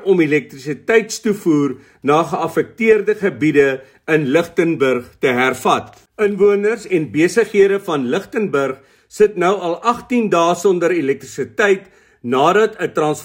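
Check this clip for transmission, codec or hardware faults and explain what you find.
Nothing in the transmission, codec or hardware chain registers as faulty anywhere in this recording.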